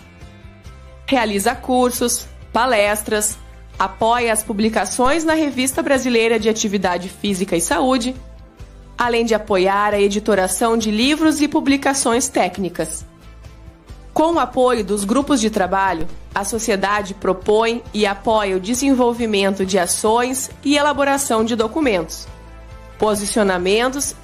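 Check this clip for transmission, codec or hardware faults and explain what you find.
Two DC steps are audible, at 5.06 s and 16.01 s. At each, the waveform's zero line jumps by about -15 dBFS and then drifts back as a 2 Hz high-pass drains the offset, giving a dull low thump. Unlike a dropout click, the sound carries on without a gap.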